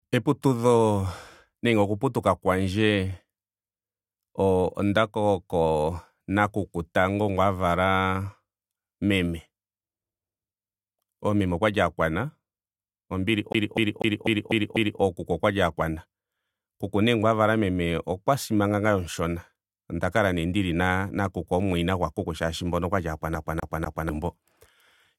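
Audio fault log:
13.53–15.01 s and 23.35–24.09 s (after "mboka okwali"), CD stuck on one turn: the laser jumps back each revolution, so a 0.25 s speech slice repeats six, then three times, with short mutes.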